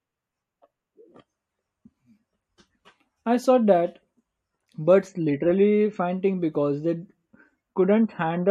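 No dropouts, clicks, distortion or timing irregularities are audible anywhere in the speech.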